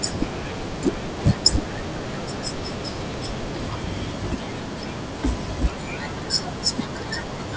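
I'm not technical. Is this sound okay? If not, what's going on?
No. A resampler restarted on every block runs from start to finish. The audio was converted to a lower quality setting in tiny 10 ms chunks, each handled separately, so every chunk edge gets a small glitch. Those glitches arrive 100 times a second, so they blur into a steady buzz that rides along with the speech and drops away in the pauses.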